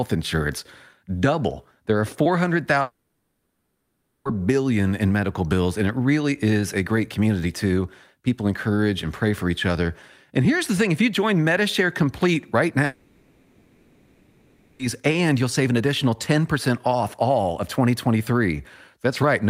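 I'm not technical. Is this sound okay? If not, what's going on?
No, there are two gaps where the speech stops and a fading buzzy hiss fills in: 2.81 to 4.27 s, before "billion in medical bills", and 12.85 to 14.81 s, before "and you'll save an". That's likely a long network dropout: audio never arrived, so that stretch is simply lost.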